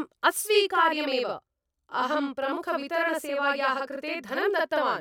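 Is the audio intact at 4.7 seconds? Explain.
No. From 0.42 s to the end, the speech has a channel delay (doubling): one channel runs about 46.4 ms behind the other, which fits a 2048-sample buffer, and the two are summed to mono. At 4.7 s every syllable is followed by an equally loud copy, heard as a tight slap echo. On the waveform each onset appears twice, 46 ms apart at matching height. On a spectrogram the transients show as doubled vertical edges.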